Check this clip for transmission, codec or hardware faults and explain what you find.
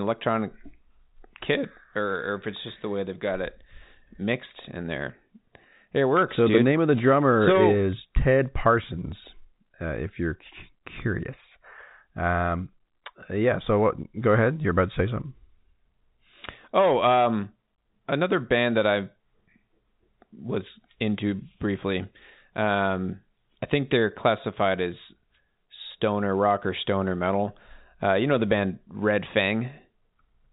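Nothing wrong found: the speech sits inside the ordinary G.711 telephone coding band, with nothing above 3.8 kHz, which fits a standard 64 kbps mu-law line.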